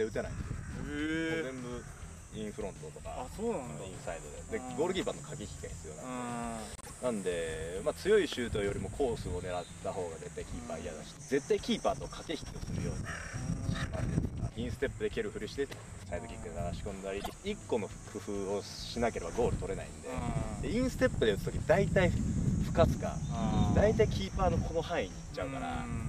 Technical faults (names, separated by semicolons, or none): frames out of order